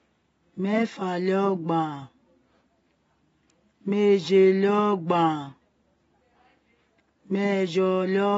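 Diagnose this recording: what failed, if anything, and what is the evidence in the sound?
Dull, band-limited speech runs through the whole recording, with nothing above 7.6 kHz and plainly audible coding damage. That points to the codec stage, likely AAC compression at a low bitrate around 24 kbps, coarsely quantising the spectrum and discarding the top band.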